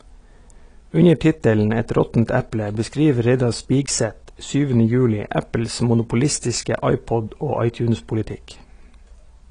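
Speech runs with plainly audible AAC compression throughout, likely AAC-LC at a bitrate near 32 kbps. Nothing survives above 10.2 kHz, and the warbling, fizzy smear on sibilants sets it apart from a clean low-pass filter.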